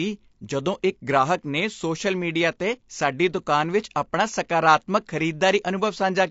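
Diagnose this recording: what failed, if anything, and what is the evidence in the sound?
The failure is at the codec stage, and the likely cause is low-delay AAC compression of the AAC-ELD kind used in video calls. Across the whole speech clip the voice sounds rough and grainy, with noise filling the gaps between harmonics and a dulled, synthetic-sounding top band, which fits a rate near 32 kbps. Short frames resolve pitch harmonics poorly. Unlike packet loss, the damage is steady throughout, with no dropouts or repeated fragments.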